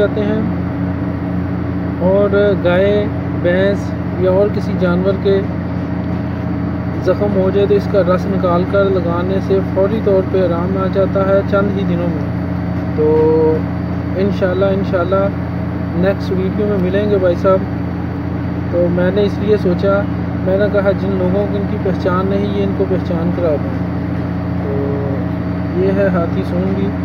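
No dropouts, clipping, glitches or level jumps are audible anywhere in the recording.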